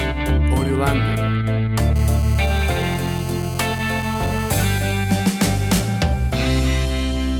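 A hard, raspy GSM phone buzz runs from 1.96 to 4.65 s, pulsing about 217 times a second with dense harmonics and sitting about 15 dB below the sound. It is steady, as during a call, and unlike mains hum its rate is 217 Hz rather than 50 or 60 Hz.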